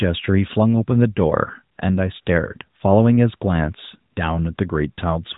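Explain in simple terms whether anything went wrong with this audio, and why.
Short gaps of AMR comfort noise interrupt the speech at 1.76 to 1.78, 2.22 to 2.26, 4.14 to 4.16 and 4.56 to 4.58 seconds. Each time, the phone wrongly decided nobody was talking and stopped sending sound. The receiving end filled the tiny hole with a smooth, artificial hiss. The real sound briefly drops out. The whole clip also has the narrow, phone-line quality of a mobile call.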